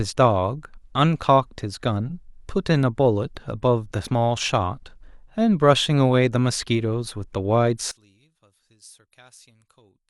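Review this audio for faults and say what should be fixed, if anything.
A brief glitch at 4.05 s is damaged data in the compressed stream: the decoder misread a frame and resynced. Verify file integrity with checksums before decoding.

From 7.91 s onward, the speech collapses by about 29 dB into a faint residue, likely one channel inverted, cancelling the centred voice when summed to mono. Check per-channel polarity before any mono fold-down.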